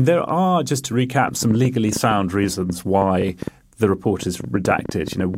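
Speech carries a train of clicks from 1.29 s to 5.35 s: some thirty near-identical pulses at about 6.9 per second, spaced unevenly and peaking around 10 dB above the speech, so they tick through pauses as well as words. Their repeated shape and steady density set them apart from vinyl-style crackle, which is random in size, and from dropouts, which remove sound. The likely cause is interference from nearby equipment or a faulty connection or power supply.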